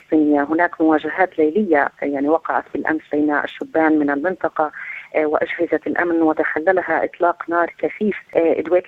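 Nothing here trips any alarm: no dropouts, glitches, clicks or distortion turn up anywhere along the way.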